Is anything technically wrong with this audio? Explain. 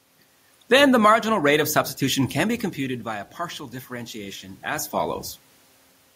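Yes. Automatic gain rising, from 1.37 to 5.25 s after "the marginal": the input dropped about 13 dB, so the gain control slowly added about 5 dB, swelling speech and room noise together.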